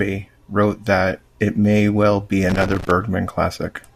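Right after "it may well be", from about 2.50 to 2.91 s, there's a burst of loose connector crackle lasting roughly 0.4 s. It's the classic sign of a worn or grubby contact somewhere in the cable run: as it shifts, the connection keeps making and breaking, so the speech gets chopped into ragged fragments. You hear it as an uneven scratchy crackle laid over the speech for that stretch.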